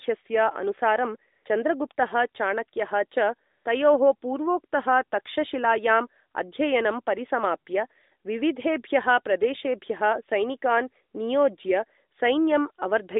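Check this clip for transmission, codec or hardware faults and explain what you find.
Two short AMR comfort noise gaps occur, at 1.32 to 1.46 s and 3.50 to 3.66 s, each lasting 140 ms and 160 ms. The sound runs through AMR narrowband mobile coding, with a line band of about 250 Hz to 3.7 kHz and light codec colouring.

AMR comfort noise: during both gaps the sending phone treated the input as silence and stopped transmitting speech frames. The receiver then generated smooth synthetic noise from a rough level and spectrum estimate. The real background drops out, replaced briefly by a flat, steady hiss.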